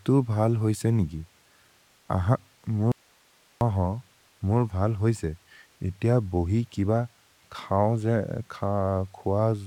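An audio dropout to a faint residue runs from 2.92 to 3.61 s. The speech cuts out abruptly for about 0.69 s, leaving only hiss roughly 35 dB down, then resumes mid-flow. The likely cause is the signal dropping while the downstream path stayed live.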